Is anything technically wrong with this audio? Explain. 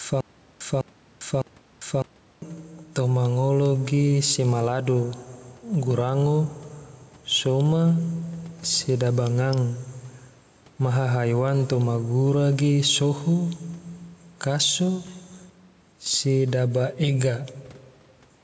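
Yes, two things. From the start until 2.42 s there's a stutter with silent gaps: a 0.2 s burst repeats three times, each followed by 0.4 s of dead silence, before "toma ngolo ge sema". A stalled stream is the likely cause. Throughout, there's gain pumping: the level ducks by roughly 5 dB under louder speech, likely from overly high gain with a fast limiter clamping down.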